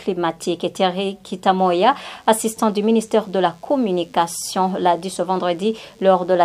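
DECT cordless phone buzz runs from 1.59 s to the end of the clip at 6.44 s: a steady, thin buzz with a 100 Hz fundamental and a dense stack of harmonics, sitting roughly 40 dB below the main sound. A DECT handset or base station close to the recording chain transmits a brief radio burst every 10 ms, and somewhere in the audio circuitry that burst is rectified, turning the 100 bursts per second into an audible, harmonically rich tone.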